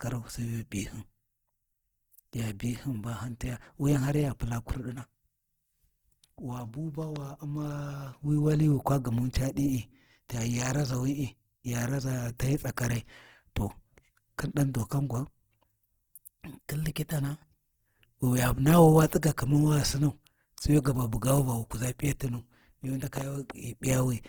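From start to finish the speech carries plainly audible Opus compression damage, likely from an encoder running its music (CELT) mode at a low rate, which fits something around 16 kbps. Bandwidth is still fullband, with content reaching up to about 20.4 kHz, so it isn't muffled. The trouble is that starved bands get filled with folded or noise-like energy, so the voice comes across grainy and rough rather than clean.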